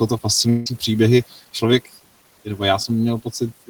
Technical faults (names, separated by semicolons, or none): channel delay (comb filtering); long network dropout; speech cut by the noise suppressor; short concealed packet loss